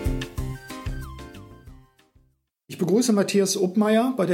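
No technical faults can be heard anywhere in the clip.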